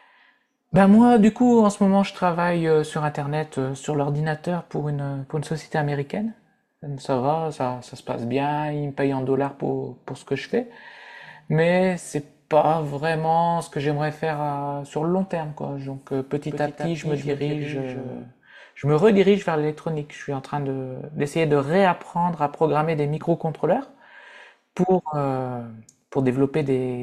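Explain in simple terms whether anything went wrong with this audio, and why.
From 16.51 to 18.23 s the speech plays twice: a doubled audio track, with a slightly quieter copy trailing about a fifth of a second behind. Unlike an echo, the copy doesn't fade or sound roomy; it starts and stops abruptly, likely from a second, slower recording path.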